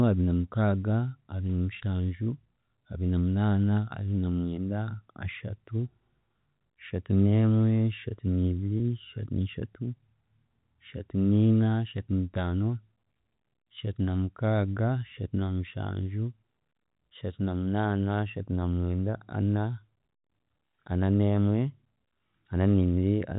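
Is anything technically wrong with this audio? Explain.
Yes. At about 8.78 s there is a packet loss with pitch repetition: roughly 20 ms of audio, consistent with a single lost packet, failed to arrive, and the receiver filled the hole by replaying the most recent pitch cycle of the speech before handing back to the real signal. Because the gap is so brief, it comes across as a tiny held, slightly buzzy sustain rather than a dropout, with no silence. The G.711 telephone coding path carrying the call leaves only faint traces.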